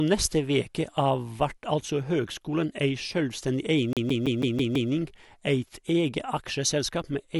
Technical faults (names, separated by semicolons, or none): CD stuck on one turn